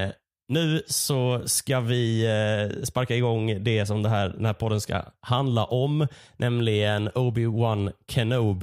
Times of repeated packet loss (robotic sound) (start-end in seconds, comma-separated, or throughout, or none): none